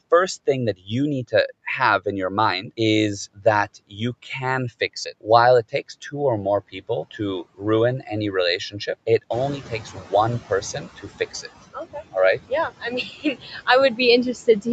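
Throughout, there are noise suppressor artifacts. The suppressor pulls the steady background down by about 20 dB, so the leftover noise ducks between phrases and rises under the speech. The speech is also cut by the noise suppressor: it mistakes bits of speech for noise and drops them by up to about 18 to 20 dB. That happens from 0.77 to 1.51 s, between "thing that" and "have in your mind", then 3.35 to 4.24 s, 4.8 to 6.14 s just before "or more", 6.72 to 8.07 s right after "or more", and from 8.7 s to the end. In each stretch, short pieces go faint or swallowed. The room noise jumps up around 9.5 s, and you can hear the noise suppressor catching up from 9.3 to 10.88 s. Its estimate lags, so the louder noise leaks through with only about 13 dB of reduction, then settles down over roughly 1.6 s as it adapts.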